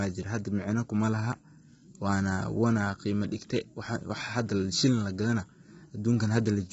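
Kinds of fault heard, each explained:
Low-delay AAC compression: The speech sounds rough and grainy throughout. Noise fills the gaps between pitch harmonics, and nothing is heard above 7.8 kHz. The likely cause is a low-delay AAC codec run at a low bitrate around 16 kbps.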